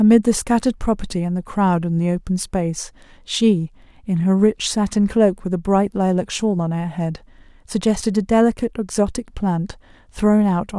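No audible technical faults.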